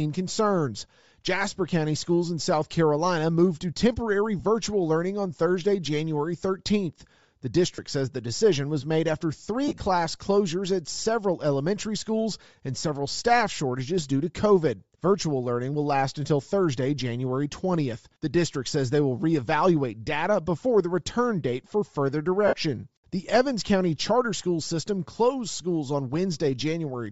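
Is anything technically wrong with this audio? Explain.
Yes. Throughout the speech there is a breathy, grainy edge, most likely from Bluetooth LC3 compression. This transform codec, running at a low rate that fits about 32 kbps with 7.5 ms frames, discards much of the upper spectrum and fills those bands with noise. On a spectrogram the high frequencies look speckled and uniform rather than following the harmonics and consonant detail. The damage is plainly audible.

Lost LE Audio frames occur at 4.39 s, 7.75 to 7.79 s, 9.68 to 9.80 s, and 22.47 to 22.53 s. In each gap the decoder reuses the previous spectrum with randomised signs, so the speech briefly turns into a noisy smear. The 9.68 s event is a scatter of losses across about 120 ms, with the longest run around 40 ms. On a spectrogram these show as short smeared blocks of noise, and in the waveform as rough, patternless patches.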